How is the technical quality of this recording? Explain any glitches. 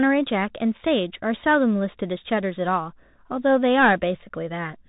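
The recording is degraded by a Bluetooth CVSD headset codec, plainly audible from start to finish. The speech is squeezed into a narrow telephone band with nothing above about 3.8 kHz, consistent with a 64 kbps CVSD stream. The codec sends one bit per sample, signalling only whether the waveform steps up or down, and adapts its step size. Fast, loud high-frequency movement outruns that step, so s sounds turn scratchy, and a granular hiss sits beneath the speech.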